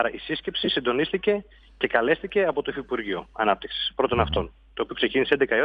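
At 0.65 to 0.68 s, 2.52 s and 4.35 s the audio shows lost LE Audio frames. The LC3 decoder fills each gap by repeating the last good spectrum with randomised signs, so the tonal content turns briefly into a noisy smear. The first gap lasts about 22.5 ms, which fits three 7.5 ms frames. The others last about 7.5 and 15 ms, which fits one and two frames. The light damage from lossy compression remains underneath.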